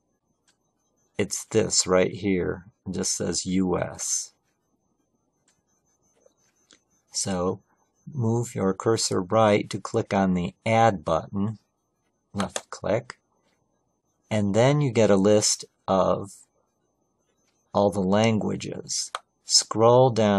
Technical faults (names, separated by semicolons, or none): none